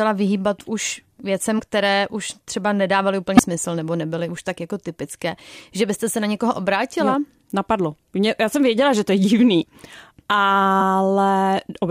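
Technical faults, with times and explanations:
1.58–1.62 s, 3.37–3.41 s and 9.59–9.64 s, compressed frames skipped: the speech jumps ahead by roughly 50, 70 and 20 ms as whole frames go unplayed.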